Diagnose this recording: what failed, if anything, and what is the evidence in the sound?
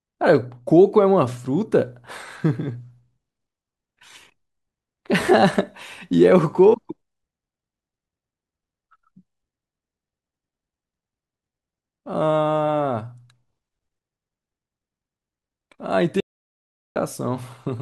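The speech cuts out abruptly at 16.20 s and resumes at 16.96 s, leaving a gap of about 0.75 s of silence with no room tone or noise floor underneath. That points to an audio dropout to silence at the capture or input stage: the signal feeding the recorder was likely interrupted by a momentary device disconnect, failed link or accidental mute, while the recorder kept writing silence. Whatever was spoken during that gap is unrecoverable.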